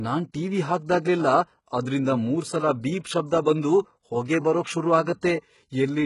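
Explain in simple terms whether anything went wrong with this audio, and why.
A couple of things went wrong here. Across the whole recording the speech has that squeezed, low-budget streaming sound, most likely from heavy HE-AAC compression. That kind of codec keeps only the lower part of the sound properly and fakes the treble by copying lower bands upward. You can hear it: the s sounds come out gritty and lispy, the brightness doesn't quite match the body of the voice, and nothing survives above about 11.1 kHz.

Then at 5.21 seconds there's a brief pre-echo. The codec handles sound in small chunks and spreads its noise across each one, so when a sharp onset lands near the end of a chunk, some hiss leaks into the quiet gap just before it. Here that smear lasts about 17 ms, so the attack sounds softened, with a short hiss ahead of it.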